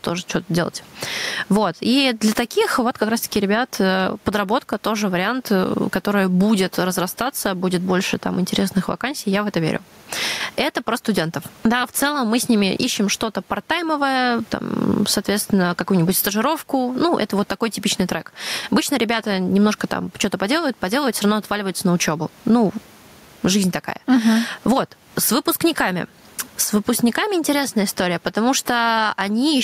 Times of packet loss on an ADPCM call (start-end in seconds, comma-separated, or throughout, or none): none